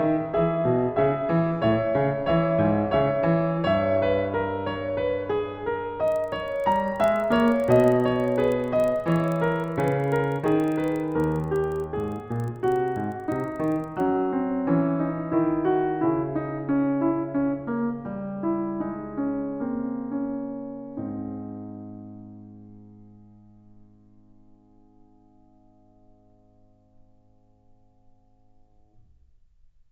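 From 6.04 s to 14.0 s the music carries a resampler restarted on every block: each 40 ms block was converted on its own, so its edges lacked true neighbouring samples and every boundary picked up a small error. The result is a steady tick at 25 Hz, heard as a buzz that rides only on the signal. The upsampling looks like 16 kHz to 48 kHz. On a spectrogram, thin vertical lines repeat every 40 ms; the waveform shows small glitches at each boundary.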